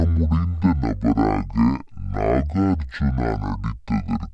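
Wrong sample rate affects this speech recording for its entire length. Everything runs at half speed and sits a full octave low, so the voice comes across deep, slow and drawn out. Because speed and pitch have dropped together by exactly the same factor, the samples are being played back at a rate well below the one they were captured at, with no conversion. The halving fits 44.1 kHz material played at about 22 kHz.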